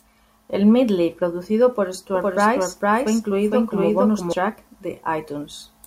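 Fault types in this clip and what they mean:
Doubled audio track: a full-band copy trails roughly half a second behind at similar loudness, cutting in and out abruptly without echo decay; likely a slower second capture.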